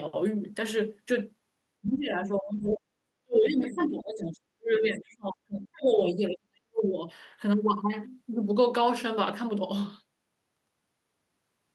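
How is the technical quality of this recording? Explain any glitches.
The recording has two related glitches, both from echo cancellation struggling while two people talked over each other.

Speech suppressed in double talk shows up from 1.82 to 2.89 s and again from 3.23 to 7.0 s. The likely cause is that the echo canceller could not tell the local talker from the loudspeaker echo and turned everything down. The speech dips by roughly 30 dB in the first stretch, losing about a second in total. In the second it drops as much as about 40 dB, for roughly three seconds.

The other side's voice leaking through appears at 1.85 to 1.97 s and at 2.62 to 2.68 s, inside the first suppressed stretch. The device plays the far end on a loudspeaker, and residual echo the canceller likely failed to remove reaches the microphone. It comes through as brief scraps of a second voice, about 20 dB and about 25 dB below the main speech respectively.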